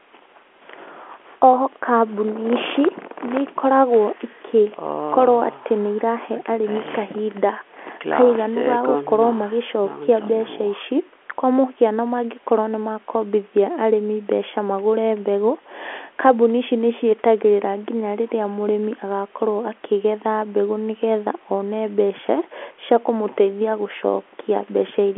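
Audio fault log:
Nothing stood out on listening to this speech clip.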